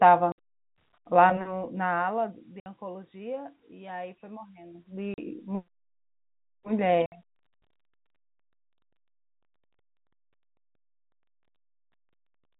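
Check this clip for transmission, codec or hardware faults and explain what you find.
There is one transmission fault: packet loss filled with silence. Dead gaps of 60 ms at 0.32, 2.6 and 7.06 s and 40 ms at 5.14 s cut the speech. They fit lost 20 ms packets replaced by silence. Their hard edges, rather than smeared or repeated sound, set them apart from concealed loss.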